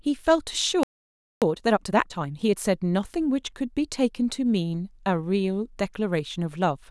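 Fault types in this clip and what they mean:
Playback stall: At 0.83 s the speech cuts off mid-flow and the output stays silent for about 0.58 s, resuming at 1.42 s. The likely cause is the player running out of buffered data or its audio thread being blocked until it recovered.
Time-compressed catch-up: From 1.42 to 2.58 s the speech sounds hurried, running at 1.5 times normal speed while keeping its normal pitch. The player is clearing the backlog from the stall by removing small pieces and cross-fading across the joins.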